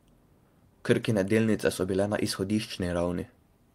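No technical faults are audible.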